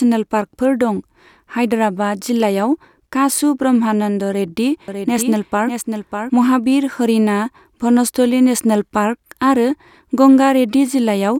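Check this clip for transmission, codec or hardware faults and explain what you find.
One fault stands out: a doubled audio track from 4.88 to 6.30 s. Here the speech gains a second full-band copy trailing roughly 0.7 s behind and a few dB quieter, with no reverberant tail or room colouring, switching on and off abruptly. The likely cause is a second, slower capture path or an edit leaving two copies overlapped. On a spectrogram, that stretch shows the same harmonic patterns repeated a fixed interval later, with hard edges.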